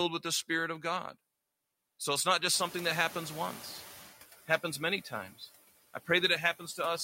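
Noise suppressor artifacts run through the whole clip. A frame-by-frame suppressor pulls down the steady background by about 14 dB, so the residue dips between phrases and swells back under the speech. Unlike a plain gate, it never cuts fully to silence.

Around 2.5 s the room noise jumps by about 15 dB. From 2.53 s, just after "it's not", the noise suppressor is catching up. Its noise estimate lags, so the louder noise comes through with only about 9 dB of reduction, then sinks over 1.57 s until 4.1 s, before "it happens many times". The steady fade distinguishes this lag from an ordinary swell in the room noise, which settles about 18 dB below the speech.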